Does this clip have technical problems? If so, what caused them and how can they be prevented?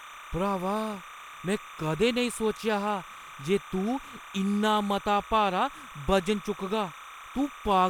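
Yes. Timecode bleed runs throughout the clip, a steady chirping warble sitting roughly 15 dB below the speech. Linear timecode from an adjacent track or cable has leaked into the audio path. Its square wave flips between tones near 1 kHz and 2 kHz as it encodes each frame, and the rhythm of that chirping fits 29.97 fps timecode. To prevent it, route timecode on a separate, well-shielded cable kept apart from audio lines.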